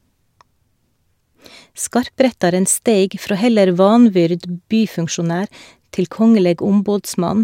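No technical faults can be heard at any point in this speech recording. There are no events to place on a timeline.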